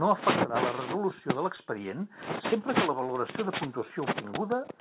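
A short concealed packet loss hits this speech recording at 1.56 to 1.60 s, just after "afectarà la resolució de": about 20 ms of audio failed to reach the receiver's decoder in time, and the receiver covered most of the gap by extending the preceding sound before blending back into the real signal. The result is a brief smear or wobble in place of whatever belonged there, heard through a call path that passes nothing above 4 kHz, consistent with G.711 mu-law at 64 kbps.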